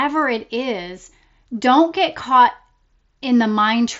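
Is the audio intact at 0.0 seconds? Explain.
Yes, the audio is intact at 0.0 seconds, with the speech passing cleanly through the Bluetooth mSBC headset codec up to about 7.7 kHz.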